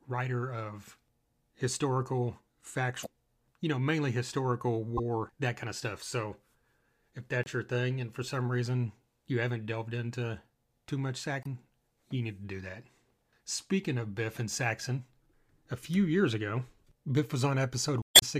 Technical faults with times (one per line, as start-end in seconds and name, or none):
3.02-3.07 damaged data in a compressed stream
4.97-5.00 damaged data in a compressed stream
7.43-7.48 damaged data in a compressed stream
11.40-11.46 damaged data in a compressed stream
18.00-18.23 damaged data in a compressed stream